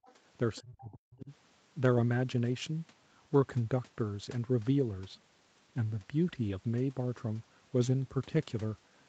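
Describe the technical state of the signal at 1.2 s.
At 1.2 s the speech sits inside a stretch of speech suppressed in double talk, running from 0.61 to 1.31 s, where the level falls away by as much as about 40 dB. The likely cause is an echo canceller that heard far-end audio at the same time as the near talker and attenuated both. The voice dips, loses its high end or cuts out in pieces, within the 8 kHz call bandwidth.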